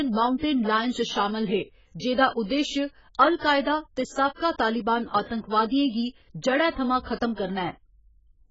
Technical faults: AAC compression

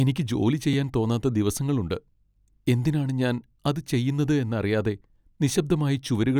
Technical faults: block of digital silence

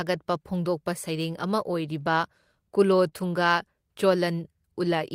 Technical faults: short concealed packet loss; lost packet rebuilt from error correction

